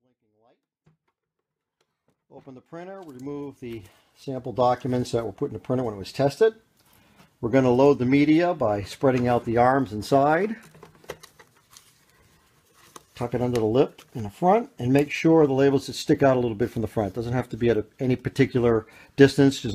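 No technical faults are present in this audio, which opens with a gradual, editor-style fade-in that reaches full level at about 5.0 s.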